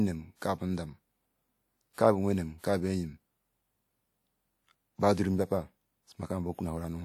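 At 1.93 s a brief wash of hiss rises out of the quiet just ahead of a sharp onset in the speech and runs for about 48 ms until the attack lands, which then sounds softened and smeared. The same pre-echo returns at 2.59 s, lasting about 49 ms. In both places a transform codec has spread the quantisation noise meant for a loud transient across its whole block, so the noise fills the silent stretch before it. A spectrogram shows broadband smearing leading each onset, and the waveform shows a low fuzz where it should be flat.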